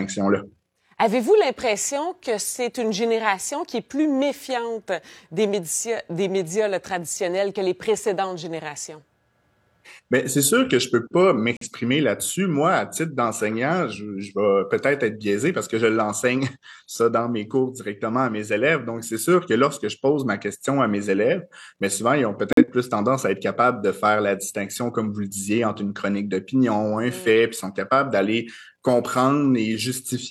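Corrupt frame muted, twice: flipped bits in the compressed stream made the decoder reject frames, and the player filled each gap with silence. At 11.57 s the sound cuts out abruptly for about 0.11 s, and at 22.51 s for about 0.13 s. Each gap is consistent with two lost frames. The sound drops to dead silence mid-flow and resumes, with the surrounding timing unchanged, so nothing speeds up or shifts.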